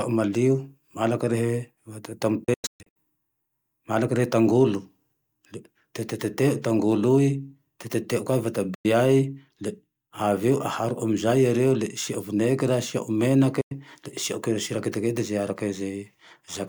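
The receiver repeatedly lost valid digital frames and muted until good ones returned, a digital broadcast dropout heard three times in this speech. From 2.44 to 2.97 s the sound breaks into several short holes, totalling about 350 ms of silence with the longest gap 128 ms. Single clean cuts of 96 ms follow at 8.74 to 8.86 s and 13.61 to 13.72 s. Each mute fades in 8 ms, so the cuts are abrupt, and the missing speech is simply gone.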